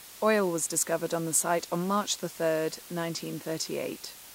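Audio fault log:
throughout, low bit depth with dither: the speech is held to only 7 bits, and dither added before rounding turns the quantisation error into a steady, even white hiss, roughly 20 dB below the speech, with no grainy distortion on quiet passages.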